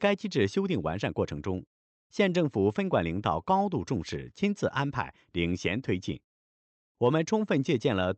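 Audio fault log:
No faults detected.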